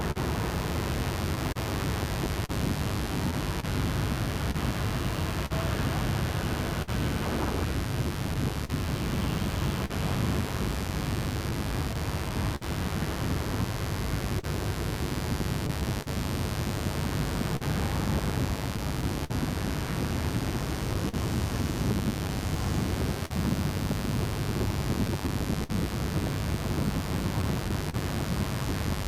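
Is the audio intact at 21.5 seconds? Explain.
No. Around 21.5 s the audio carries three overlapping faults.

The scattered short gaps run from 14.39 s to 27.95 s. Around twenty small holes fall across that stretch, the longest near 50 ms, totalling roughly half a second, or about 4% of the span. Each hole was patched by extending the preceding sound, so instead of silence the listener hears brief ticks, smears and hiccups punctuating otherwise continuous audio. This points to individual packets lost or arriving late.

Mains buzz is present for the whole clip. Sharp switching spikes from a dimmer, rectifier or unshielded line enter twice per 50 Hz cycle, building a dense stack of harmonics reaching into the low kHz range. The result is a steady, raspy buzz sitting only about 10 dB below the wanted signal.

Clock drift between sender and receiver also runs throughout. The sender's clock is slow by roughly 3%, so the receiver's jitter buffer keeps draining and must repeat short fragments. 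This produces small timing hiccups at irregular intervals across the whole clip, which at 21.5 s mix with the concealment artefacts from the packet gaps.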